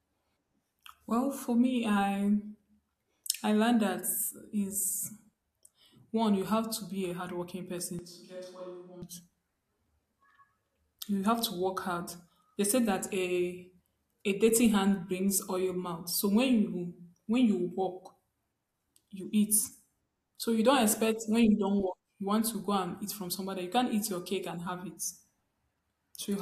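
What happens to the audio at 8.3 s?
At 8.3 s the speech is in a switch to a distant microphone, running from 7.99 s to 9.02 s, just after "to be a hardworking". The sound turns roomy and hollow, loses low end, drops by roughly 5 dB, and carries more audible room noise, around 35 dB below the speech. The close microphone's feed was likely lost and a farther pickup took over, with abrupt changes in and out.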